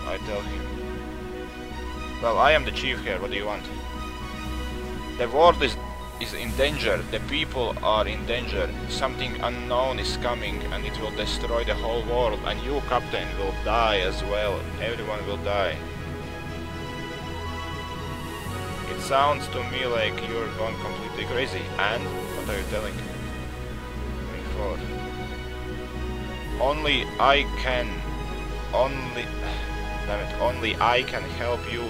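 Nothing goes wrong anywhere in this audio; there's no glitch, dropout or odd artefact to point to at any moment.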